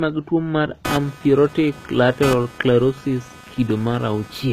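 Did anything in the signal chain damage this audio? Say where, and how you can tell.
Yes. At the codec stage, the speech carries the smeared, swirly texture of heavy perceptual coding, and nothing is present above 14.9 kHz, yet the file is a high-bitrate MP3. This is likely low-bitrate audio saved at a high bitrate: a very lean first encoding discarded detail, and re-encoding generously afterwards could not restore it. The second pass only preserved the earlier artefacts and band limit.

In the analogue wiring, computer activity noise begins at 0.85 s, just after "mag tuo mar", and runs to the end at 4.53 s. It is a pulsing buzz, repeating around 300 times a second and sitting roughly 15 dB below the speech. It rises and falls independently of the talker, which points to processor or graphics load currents disturbing the ground shared with the audio circuit rather than anything in the recorded sound itself.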